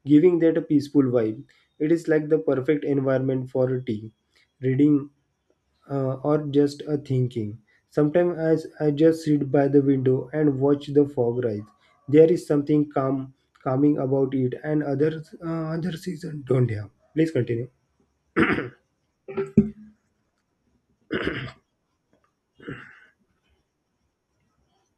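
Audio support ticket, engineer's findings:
No faults found in this speech recording. Nothing to escalate from this listen.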